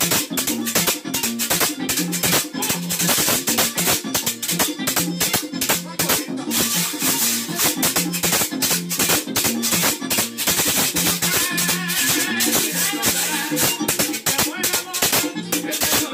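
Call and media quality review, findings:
No audible faults identified anywhere in the clip; no findings to log.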